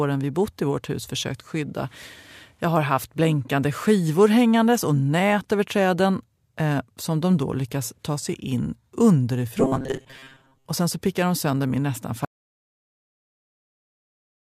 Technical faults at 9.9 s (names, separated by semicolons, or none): robotic sound from repeated short buffers